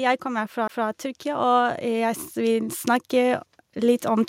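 From 0.22 s to the end, automatic gain rising is heard. The gain control judged the input too quiet. It raised its gain step by step. The speech and the background swell together. The level keeps climbing for about four seconds.

At 0.67 s there is a CD skip. A knock or a flaw threw the laser onto another turn of the disc's spiral. The player muted very briefly, for about 15 ms. Then the speech resumed from a different place.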